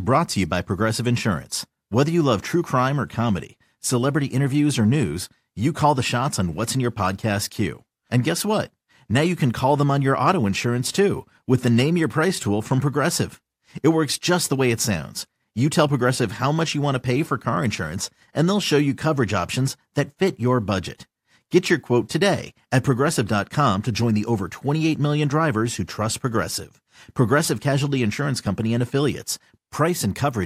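No technical faults can be heard anywhere in this speech recording; the signal stays continuous and steady in level from its first moment to its last.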